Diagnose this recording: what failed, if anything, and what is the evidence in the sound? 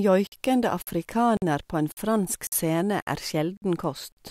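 Gap between chunks at 0.27, 0.82, 1.37, 1.92, 2.47, 3.02, 3.57 and 4.12 s: 50 ms silences after every 0.5 s chunk, interrupting the speech at each join in playback or chunked delivery.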